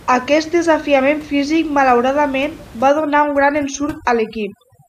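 A speech recording with room noise sitting about 23 dB below the voice, until overdone noise removal takes hold from 2.89 s to the end. Bands near the noise floor are pulled almost to nothing, leaving twinkling specks; a spectrogram shows patchy, isolated dots where the noise floor was.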